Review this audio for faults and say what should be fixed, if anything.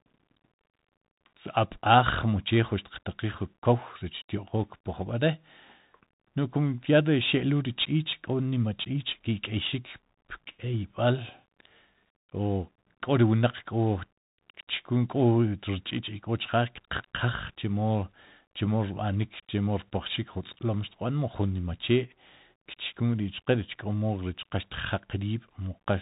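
The Bluetooth CVSD headset codec runs throughout: nothing above 3.8 kHz, with one-bit slope tracking leaving scratchy sibilants and granular hiss, consistent with a 64 kbps link. Record with a wideband mic or codec instead of the headset's hands-free profile.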